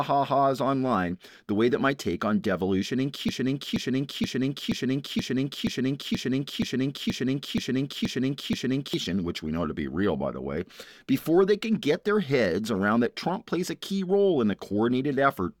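From 3.29 s to 8.94 s a broken-record loop sets in. One 0.48 s fragment repeats twelve times back to back, and the intended sound is lost, likely because playback stalled and resent its last buffer. Waveform and spectrogram show one identical block tiled end to end.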